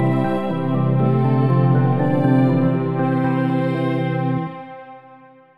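Channel delay (comb filtering) runs throughout the clip. One channel trails the other by only a few samples, well under a tenth of a millisecond. When the two are summed to mono, the content they share cancels at evenly spaced frequencies, and with so short an offset the first notch falls high, around 7 kHz. The result is a dulled, slightly hollow top end, with the upper detail thinned by fixed notches that stay put from start to finish.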